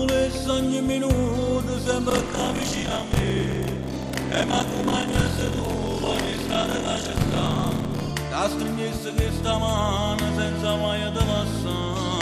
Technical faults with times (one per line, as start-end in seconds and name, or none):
2.09-8.11 buffer tearing